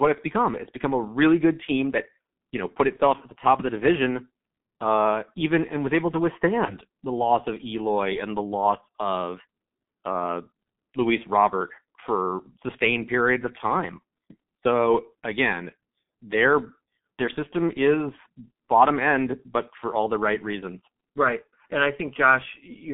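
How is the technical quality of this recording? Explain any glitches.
Technical quality is poor: the whole recording is heavily coded, and two short concealed dropouts interrupt the speech.

Throughout, the G.723.1 codec dominates. Its low-rate coding, consistent with about 6.3 kbit/s, keeps only roughly 150 Hz to 3.5 kHz and refreshes its spectral model slowly across 30 ms frames, so the speech is muffled and hoarse, with smeared consonants.

At 2.96 to 3.01 s, between "that you know put" and "at the top of", and again at 6.65 to 6.76 s, between "and was able to" and "the loss of", there is VoIP packet loss concealed by the speech codec. Each gap fits one lost 30 ms frame. The decoder extends the previous pitch and filter at falling gain, giving a brief stretched, fading sound, and the speech stays weak or distorted just after.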